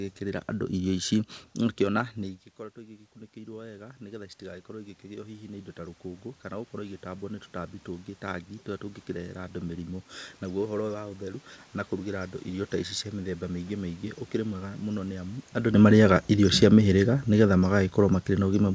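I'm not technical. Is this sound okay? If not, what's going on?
No. The level control misbehaves twice, and the whole sound, voice and room noise together, gets louder and then quieter.

The first problem is automatic gain rising, from about 2.18 to 10.12 seconds. Around 2 seconds the speaker's voice drops away from the microphone. The automatic volume control notices and slowly turns itself up. This takes about eight seconds. So the voice creeps louder, and the background noise in the room swells with it.

The second problem is automatic gain falling, from 15.86 seconds to the end. Just before, around 15.5 seconds, the speaker moves at the microphone. The volume control reacts by slowly turning itself back down. The sound sinks. The room noise sinks along with it, all the way to the end.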